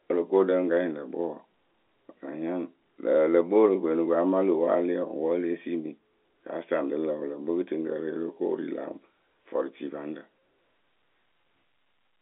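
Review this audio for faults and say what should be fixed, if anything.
No faults; nothing needs fixing.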